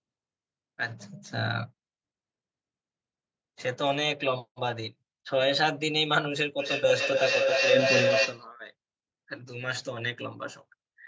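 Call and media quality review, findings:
Feedback howl, 6.59–8.47 s: tone near 500 Hz pulsing roughly every 300 ms, peaking about 3 dB over speech. Co-located call devices; acoustic loop gain exceeds unity, so repeats grow.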